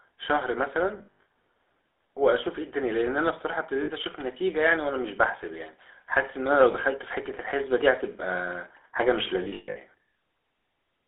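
It's a speech clip that sounds like the GSM full-rate codec throughout: the band is 300 Hz to 3.6 kHz, and the gravelly buzz fits a 13 kbps stream. There are also lost GSM frames at 0.98–1.26 s, 3.84–3.91 s, 6.72–6.75 s and 9.44–9.78 s. Each gap is covered by repeating the last good frame, so it comes out as a rough metallic ring. The first and last bursts are scattered, with runs up to about a tenth and roughly 0.15 s.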